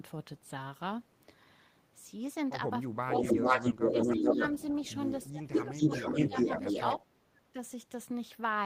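When both ends talk at once, the far end's echo canceller likely fails to tell its own talker from loudspeaker echo and turns everything down. The result is speech suppressed in double talk from 2.89 to 3.45 s, where the voice sinks by roughly 25 dB. Overlapping that, from 3.18 to 4.62 s, the same canceller likely leaves residual loudspeaker pickup unremoved, so an echo leak returns the voice about 418 ms late, about 5 dB louder than the live speech. From 3.9 to 4.39 s the speech dips again, by around 15 dB. A faint echo leak follows at 4.83 to 5.27 s, about 25 dB down at the same 418 ms delay. From 5.29 to 6.76 s the suppression returns, pulling the voice down by about 20 dB for roughly a second in total, while a loud echo, about 5 dB above speech, runs from 5.52 to 6.99 s. The deepest cut comes at 6.97 to 7.57 s, where the speech drops by around 35 dB.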